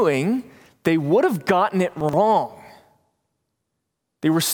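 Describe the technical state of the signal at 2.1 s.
At 2.1 s the speech has chunks out of order, from 2.01 to 2.13 s. Audio moves in blocks of about 42.7 ms here. One block arrived late and plays two blocks after its proper place, behind the two that should follow it. Nothing is missing. The sequence is simply wrong for about 128 ms. That leaves three hard joins where unrelated audio meets. The result is a brief jumbled, garbled moment in the speech.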